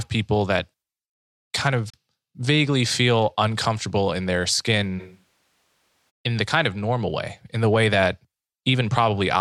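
Digital broadcast dropout at 1.90 to 1.94 s, just before "vaguely feel uncomfortable in": a 3 ms fade into a roughly 32 ms mute, consistent with one corrupted frame being discarded. Switch to a distant microphone from 5.01 to 6.09 s, between "feel uncomfortable in their" and "in the kind of": the speech abruptly turns hollow and roomy, drops roughly 10 dB, and carries more background noise. The likely cause is that the close microphone dropped out and a farther one filled in.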